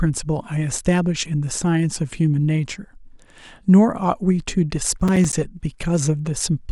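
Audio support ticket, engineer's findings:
Burst of gritty crackle, 5.00–5.33 s, speech audibly torn by short hard-edged silent gaps. Processor overload crackle: audio thread missing repeated deadlines, a handful of roughly 10 ms buffers left unfilled and output as silence. Check CPU load during that window.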